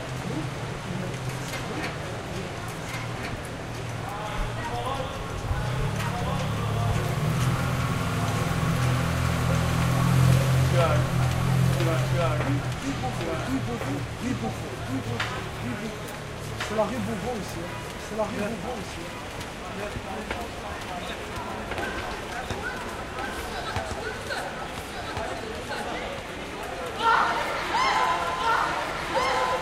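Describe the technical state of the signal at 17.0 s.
At 17.0 s the signal carries a doubled audio track, present for the whole clip: the same audio is likely mixed in a second time through a slower path or a misaligned edit. A second copy trails the original by roughly one and a half seconds, about 5 dB quieter, with no decay or room colouring. The result is a dry, full-band repeat of each sound, overlapping whatever comes after it.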